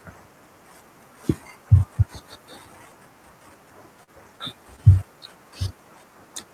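At 4.03 to 4.10 s, short concealed packet loss: about 40 ms went missing and was synthesised, leaving a brief smear.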